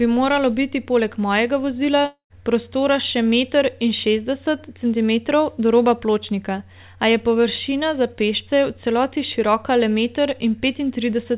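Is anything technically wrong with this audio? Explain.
Yes. From 2.06 to 2.33 s, after "biti poleg mojega vozila", there is a likely long network dropout. The receiver stretches the last sound into a fading buzz, then gives 0.1 s of silence. Audio resumes at "prostora še meter in" with the missing section gone.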